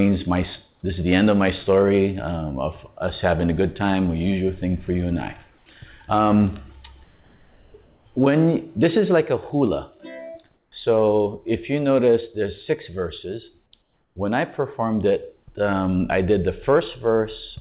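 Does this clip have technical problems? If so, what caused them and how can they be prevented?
Yes. Comfort noise replaces the background in the pauses at 5.58–5.66 s, 7.04–7.74 s, 7.84–8.06 s, 10.54–10.72 s and 13.82–14.16 s. The real background gives way to a steady, featureless hiss, about 3 dB quieter at 5.58 s and about 2 dB quieter at 10.54 s and 13.82 s. This likely comes from discontinuous transmission: the sender stopped sending audio during quiet stretches, and the receiver filled each gap with synthetic noise. On a spectrogram these spans show a smooth, uniform texture in place of the detailed background. On the waveform they appear as flat, even-amplitude noise. Disabling DTX or voice-activity-based suppression on the sending side prevents it. Throughout, the sound is band-limited with nothing above 4 kHz, which fits a G.711 call path.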